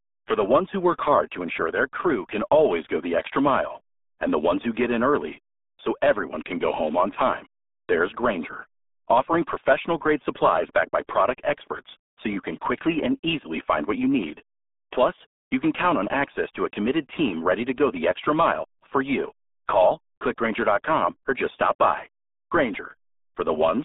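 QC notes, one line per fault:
Throughout: RealAudio 14.4 codec. The speech has passed through the old RealAudio 1 dial-up codec at a data rate so low it fits an 8 kbit/s stream, so the encoder keeps only a narrow band of roughly 250 Hz to 3.6 kHz and discards everything above 3.8 kHz. With the lows and all the upper detail gone, and heavy coding damage in what remains, the speech comes out muffled, boxy and gargly, with consonants smeared.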